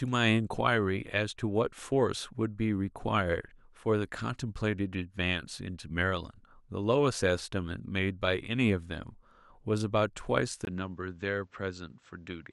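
At 10.65 s the speech turns duller and boxy, with a brief 20 ms gap at the join, and stays that way to the end. The likely cause is an input switched to a poorer device. From that point nothing reaches above 8 kHz, the level falls by roughly 5 dB, and a new noise floor appears, around 40 dB below the speech. A spectrogram shows the upper band abruptly emptying, and the waveform steps down in amplitude after a thin gap.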